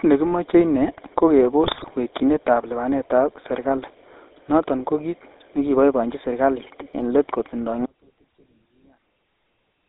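Speech heard throughout through a GSM full-rate codec, confined to roughly 300 Hz to 3.7 kHz, with a buzzy, gravelly roughness that fits 13 kbps coding rather than simple band-limiting. From 1.64 to 1.92 s, between "nekimoche ine ko" and "wekyinetab lipanet ab serkali", GSM bit errors produce squawks, pops and gargling. Unlike packet loss, the decoder keeps producing mangled sound instead of gaps or repeats. At 7.86 s, after "en let kotindoi", an audio dropout to a faint residue lasts to the end, likely because the signal was lost upstream while the path stayed live. The cut is abrupt, not a pause or fade, and leaves only a faint trace around 40 dB down rather than true silence.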